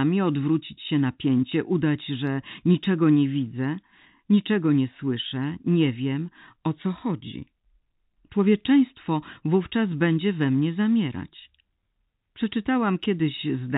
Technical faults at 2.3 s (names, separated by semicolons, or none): none